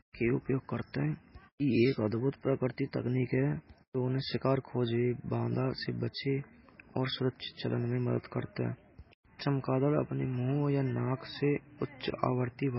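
Throughout the speech, an encoder short of bits has likely applied heavy MP3 compression at a rate that fits around 16 kbps. Nothing remains above 5.5 kHz, so the speech sounds dull, and weak detail flickering between frames gives a watery, swirling texture.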